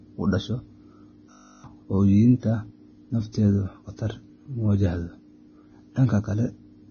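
Throughout the speech, the treble stops dead at 6.5 kHz. Above that there is nothing. Below it, the detail is heavily degraded. Fine texture turns grainy and hissy, tones sound roughened, and attacks are smeared. The likely cause is Vorbis compression at a very low quality setting, which fits a bitrate near 17 kbps. At that setting the encoder drops the top band. It then quantises what remains so coarsely that detail is replaced by noise of similar energy.

From 1.32 to 1.64 s there is a system hang loop. One 20 ms slice of audio repeats exactly, 16 times over. This happens when the computer or driver freezes while the sound hardware keeps replaying its ring buffer. A loop this short does not stutter. It fuses into a steady buzz at 50 Hz. About a third of a second of the real speech is lost behind it.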